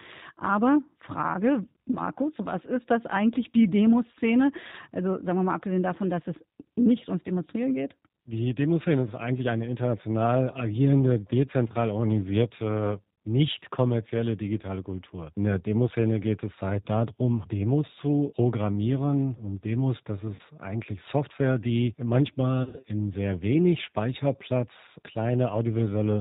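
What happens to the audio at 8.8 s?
At 8.8 s, as throughout the clip, the speech passes through a G.729 codec, which fits an 8 kbit/s stream, rebuilding it from a vocal tract model and a few pulses per frame. Nothing above 4 kHz survives, so the speech sounds muffled, rough and plainly synthetic.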